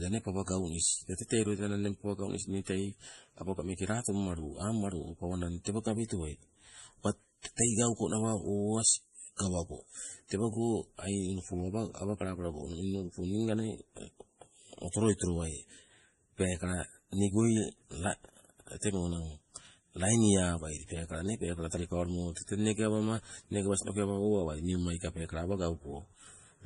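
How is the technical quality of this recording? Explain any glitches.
The technical quality is poor: heavy codec damage runs through the whole speech recording, and there is one short pre-echo.

MP3 compression, likely at a low bitrate near 32 kbps, leaves nothing above 11.4 kHz and gives a watery, swirling texture. Unlike plain low-pass filtering, the remaining content also flickers.

Pre-echo appears from 9.36 to 9.39 s as a 30 ms hiss before an attack. The block's quantisation noise leaks backwards, which separates it from a click or a reverb tail.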